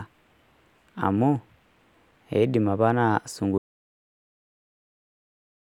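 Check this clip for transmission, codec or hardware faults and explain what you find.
One fault is present: an audio dropout to silence. At 3.58 s the speech cuts off mid-flow and the clip stays at digital silence to the end, with no room tone. The likely cause is lost input, such as a disconnected device or failed link, while recording continued writing silence.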